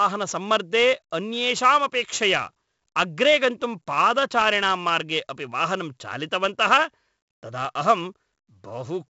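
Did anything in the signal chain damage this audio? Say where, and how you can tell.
Yes, at the codec stage, throughout the speech. 4-bit ADPCM compression leaves a gritty hiss that rides on every loud syllable and distorts sharp attacks, as the step size lags. Nothing is heard above 7.7 kHz, which fits a 64 kbps stream.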